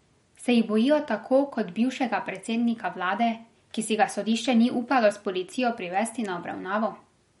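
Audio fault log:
Throughout: MP3 compression, likely around 48 kbps; spectrogram shows a hard ceiling at 11.2 kHz and flickering, patchy upper bands, heard as watery swirl.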